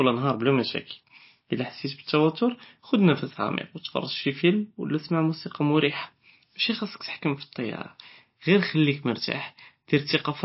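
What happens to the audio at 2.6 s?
MP3 compression at 2.6 s and throughout: likely a starved encoder near 27 kbps cutting treble and weak lines, leaving watery speech with nothing above 5.6 kHz.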